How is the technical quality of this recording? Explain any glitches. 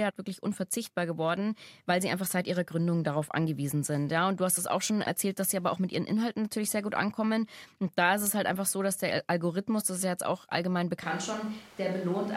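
The recording has one clear fault, near the very end of the speech.

Switch to a distant microphone, from 11.03 s to the end: right after "ja jetzt auch allgemein" the sound suddenly turns roomy and hollow, with thinner bass, a level about 5 dB lower, and background noise rising to about 20 dB below the speech. The likely cause is that the close microphone dropped out and a farther one, such as a camera's, carried the audio. A plain gain drop would keep the same tone, and a filter would not add room reflections.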